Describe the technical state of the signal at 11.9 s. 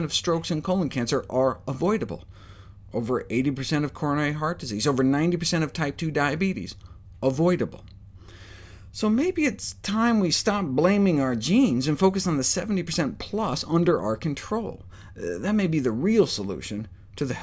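At 11.9 s the signal is intact, with no dropout, distortion, glitch or other technical fault audible at that moment.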